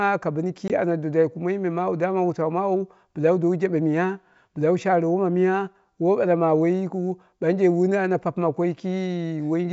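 At about 0.68 to 0.72 s, right after "ka bɨni" and before "ana dwadwai", there's packet loss on an ADPCM call. Roughly one packet's worth, about 20 ms, drops out as a hard-edged gap of silence. The decoder's predictor and step size then lose track of the sender's, so the speech comes back with a bit of distortion until they realign. The G.722 wideband coding underneath sounds clean, which fits the full 64 kbit/s mode.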